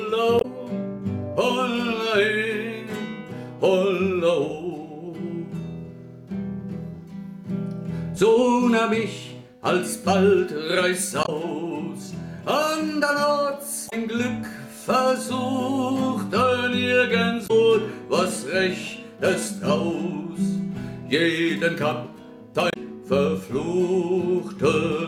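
Five short bursts of damaged data in a compressed stream occur at 0.38–0.45, 11.22–11.29, 13.86–13.93, 17.44–17.51 and 22.69–22.77 s. Each lasts about 70–80 ms. Corrupted bytes leave the decoder misreading frames and hunting for the next valid header, giving a brief chirp, squawk, click or short hole.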